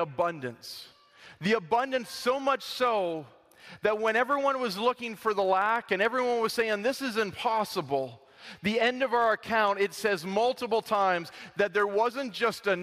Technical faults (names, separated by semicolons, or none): block size mismatch (truncated)